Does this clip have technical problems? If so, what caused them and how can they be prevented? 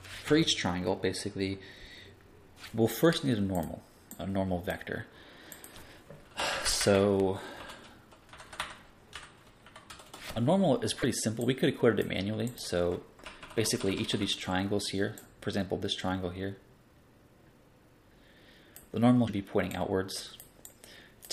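Yes. Three brief glitches occur, at 2.63–2.66 s, 11.01–11.04 s and 19.27–19.30 s, each about 30 ms long, where the audio skips forward and the following moment comes out garbled. This is likely a broken MP3 bit reservoir: frames of about 26 ms were lost, so the next frame reached back for borrowed bits and decoded bytes from an unrelated frame. Prevent it by cutting or streaming MP3 only with tools that keep the bit reservoir intact, and by keeping transport and storage lossless.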